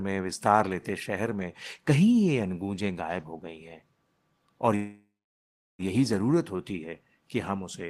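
From 4.75 to 5.82 s, a call audio freeze. Sound fades to silence, likely from stalled packets, then resumes where it stopped.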